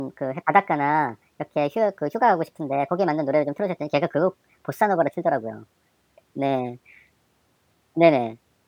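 From the first moment to the end, the speech runs at the wrong sample rate. Playback is 1.5 times too fast, which fits material recorded at 32 kHz being clocked out at 48 kHz with no rate conversion. Because speed and pitch are tied together here, every syllable is shortened by the same ratio and the voice sits about 7.0 semitones high, giving a hurried, chipmunk-like delivery with correspondingly raised formants.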